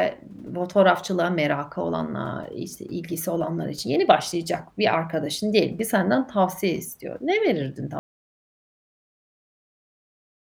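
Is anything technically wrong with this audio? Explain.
Yes. An audio dropout to silence begins at 7.99 s and lasts to the end: the speech cuts off mid-flow into silence with no room tone, likely because the input was lost while the recorder kept writing silence, so everything after that point is missing.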